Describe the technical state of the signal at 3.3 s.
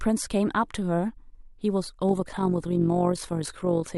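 At 3.3 s the speech is under overlap-add ripple, which runs from 2.09 s to the end of the clip. The signal has been split into windowed frames and reassembled with an overlap whose window gains do not add up to a constant. The level therefore swells and dips once per frame, by about 6 dB, at a rate of around 50 Hz. It is heard as a fast, rough flutter, a buzzy tremolo over the voice.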